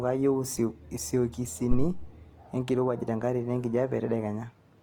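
Right from the start the speech has a grainy, rough texture, with tonal parts turning noisy even though content reaches up to about 20.3 kHz. That points to Opus compression, likely in its music mode at a rate around 24 kbps, refilling starved bands with folded or noise energy.

At 1.71 s there's a phantom power thump, a deep low thud running to about 2.04 s and dying away over roughly 73 ms. A supply was switched on or off on a live input, and that voltage step pushed straight through the coupling capacitors.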